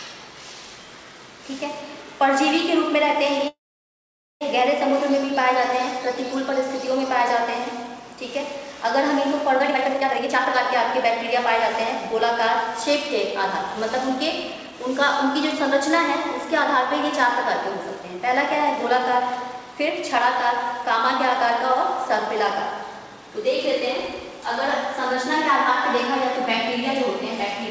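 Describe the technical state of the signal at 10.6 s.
At 10.6 s the audio is inside a jitter buffer speed-up running from 9.59 to 11.45 s. The receiver had built up excess buffered audio and trimmed it by repeatedly cutting out pitch-period-length slices, around 0.7 s in total, so this stretch plays at about 142% speed with unchanged pitch and sounds hurried. On a spectrogram the harmonics keep their spacing, but events crowd closer together in time. Nothing shows above 8 kHz.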